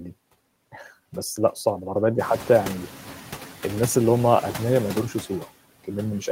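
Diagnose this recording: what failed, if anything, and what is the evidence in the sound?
Throughout the clip, the background noise sinks in the gaps and swells back up under the speech. These are noise suppressor artifacts from the call-processing stage. Frame by frame, the suppressor cuts any band it judges to be steady noise by about 14 dB, and it lets those bands back up while speech is present.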